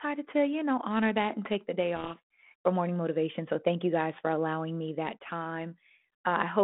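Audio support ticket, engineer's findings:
Codec payload misread, 1.96 to 2.54 s, after "and take the day". Harsh rasping distortion buries speech until "for morning motivation". Probable G.726 code-word bit order mismatch; decoder misreads each sample.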